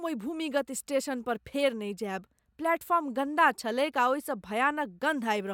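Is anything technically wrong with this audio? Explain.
No, nothing in this speech recording points to a technical fault. There is nothing to single out at any point in the clip.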